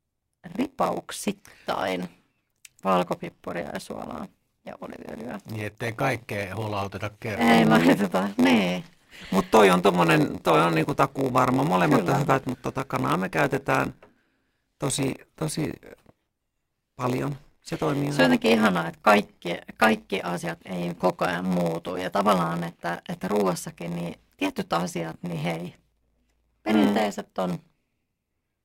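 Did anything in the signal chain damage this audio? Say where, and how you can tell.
Yes. A block size mismatch (padded) in the driver or buffer stage: each write falls short of the block the next stage reads, which fits a 512-sample read, and zeros fill the remainder. The speech carries a 93.8 Hz buzz throughout and runs at 0.938 speed, though the timbre stays.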